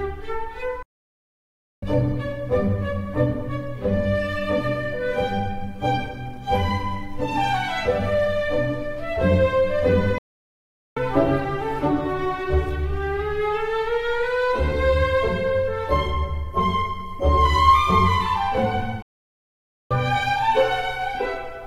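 The player likely ran short of data, causing a playback stall: the sound cuts out mid-flow for about 1.0 s at 0.83 s, 0.78 s at 10.18 s and 0.88 s at 19.02 s.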